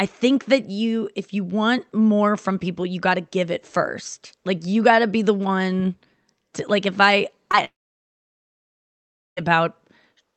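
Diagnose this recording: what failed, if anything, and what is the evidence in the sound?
Short concealed packet loss at 7.51 to 7.55 s, in the network stage. About 20 ms of audio reached the decoder too late to play, so the receiver extended the preceding sound briefly and blended back into the real signal, leaving a small smear in the speech.

Long network dropout from 7.65 to 9.39 s. The last sound trails off as a fading buzz or hiss, then about 1.65 s of near silence follows, and speech resumes later with roughly 1.7 s lost. The likely cause is a stall in packet delivery that outlasted the concealment.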